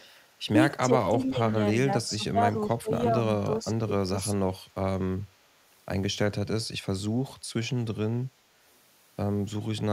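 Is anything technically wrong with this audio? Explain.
Yes, two kinds of fault are audible.

Echo leak at 0.00 to 0.13 s and 1.25 to 1.29 s: a faint copy of the speech returns about 369 ms late, roughly 25 to 30 dB below it. This is likely a far-end loudspeaker echo that the echo canceller failed to fully remove.

Speech suppressed in double talk at 0.54 to 2.39 s and 2.78 to 4.56 s: the speech dips, by up to around 10 dB in the first stretch and around 20 dB in the second. This likely happened because the echo canceller, with both sides talking at once, mistook the talker for echo and attenuated both.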